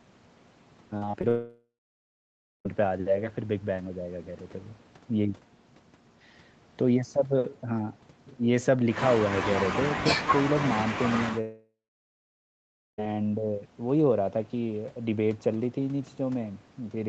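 From 0.97 to 1.25 s the speech turns choppy and robotic. This is repeated packet loss. Four short gaps, the longest 39 ms, were each patched by stretching the previous sound. About a third of that span is filled-in audio.

At 1.29 s the speech breaks off until 2.67 s. A brief fading buzz or hiss gives way to nearly a second of silence. This is likely a long network dropout, and the missing speech never returns.

A second break runs from 11.41 to 13.00 s. Again a short decaying buzz or hiss is followed by about 1.2 s of silence. This is likely another long network dropout. The lost stretch is skipped when the audio resumes.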